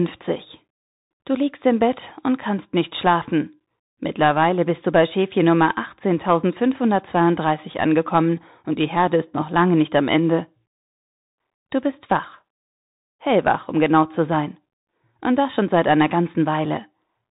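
Bluetooth CVSD headset codec damage runs through the whole clip, and it is plainly audible. Each sample is coded as a single up-or-down bit with an adapting step size, which fits a 64 kbps CVSD link. Nothing above 3.8 kHz survives, so the speech sounds boxed-in and narrow. Sharp, loud high sounds outpace the step and distort, s sounds come out scratchy, and a fine granular hiss sits beneath the speech.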